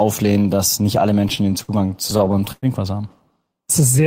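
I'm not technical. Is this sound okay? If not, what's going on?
No. Between about 1.2 and 2.7 seconds the speech catches and drags, hiccuping over a dozen times. These are repeated stalls (stutter): the sound arrived late, so the player kept stretching what it had, up to about a tenth of a second each time, while nothing was actually lost.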